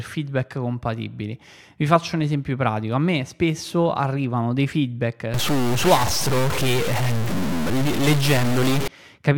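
From 5.34 s to 8.88 s the speech turns harsh and buzzy, likely from a stuck bit: one data bit holds a fixed value, shifting samples by a step of about -20 dBFS. The waveform shows jagged step offsets, and spectrogram pauses fill with broadband noise.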